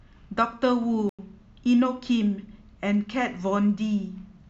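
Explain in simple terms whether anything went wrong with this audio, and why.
A corrupt frame muted the audio: the decoder rejected damaged data, so the player inserted silence, an abrupt hole in the speech from 0.84 to 1.19 s.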